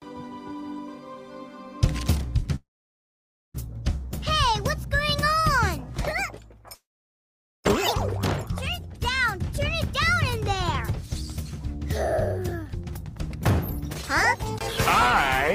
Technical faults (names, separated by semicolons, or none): call audio freeze; jitter buffer speed-up